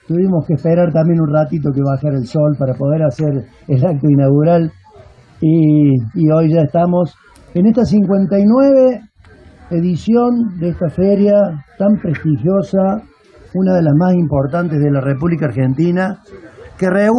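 Listening through the whole recording, nothing stood out as a technical problem at any point.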